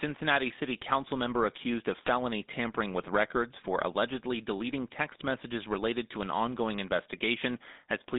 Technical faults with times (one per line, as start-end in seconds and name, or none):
0.00-8.18 GSM full-rate codec
2.04-2.09 GSM bit errors